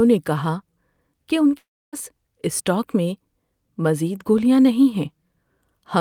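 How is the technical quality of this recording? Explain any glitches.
One clear glitch disrupts the speech. From 1.57 to 1.95 s, right after "کہ ان", there is a long network dropout. The last sound smears into a fading buzz. Then about 0.29 s of near silence follows. Speech resumes at "اسٹاک میں" with roughly 0.36 s missing. Likely, packets stopped arriving and the receiver's concealment ran out.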